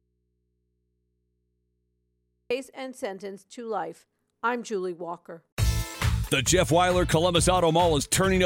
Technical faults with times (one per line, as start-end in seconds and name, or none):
0.00-2.50 audio dropout to a faint residue